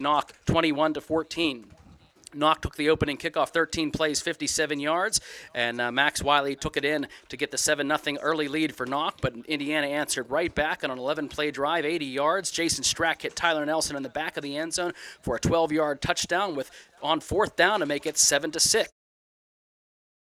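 Nothing stood out on listening, and the gentle fade-out in the last second or so arrives smoothly with no click or hard edge.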